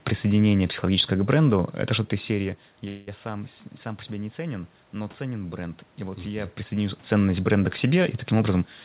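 From 2.88 to 3.09 s, delayed packets likely emptied the jitter buffer. This call audio freeze stretches the last sound into a fading 190 ms buzz or hiss, losing nothing.

From 8.51 to 8.62 s, a jitter buffer speed-up cuts about 50 ms in pitch-period slices, rushing the audio to 148% speed at unchanged pitch.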